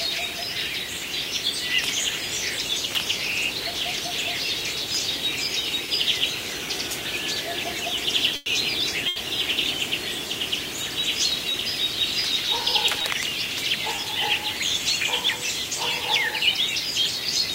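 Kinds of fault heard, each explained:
Short concealed packet loss: brief smears or wobbles at about 5.86, 11.52, 13.02 and 13.96 s. Each time, about 20 ms of audio never reached the decoder in time, so the receiver extended the preceding sound to fill the hole, then blended back into the real signal.
Burst of packet loss: a held, dying-away stretch of the last sound at 8.36 to 8.48 s and again at 9.08 to 9.18 s. Packets were lost or came too late, so the receiver extended the preceding sound, fading it, over 100 ms and then 80 ms. The same amount of audio is missing when playback resumes.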